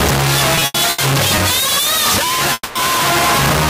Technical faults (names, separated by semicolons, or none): stuck bit; repeated stalls (stutter); call audio freeze; periodic USB or driver dropouts